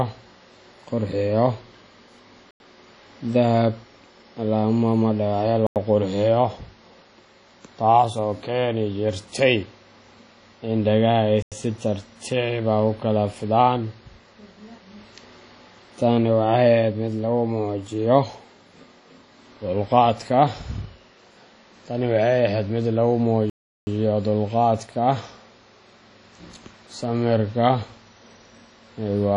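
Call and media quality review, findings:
Ringing, washy speech with hiss pumping alongside it; likely WMA compression at a low bitrate near 32 kbps. Spectrogram: hard ceiling at 10.1 kHz, smeared, patchy bands below.

Block of digital silence at 2.51, 5.67 and 11.42 s (93 ms each) and 23.50–23.87 s (372 ms). Likely buffer underrun, consistent with 4096-sample blocks. Waveform: flat silent runs, abrupt cut-out and back with no fade.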